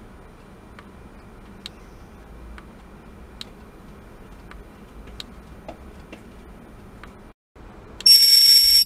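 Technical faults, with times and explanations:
No technical faults can be heard anywhere in this clip.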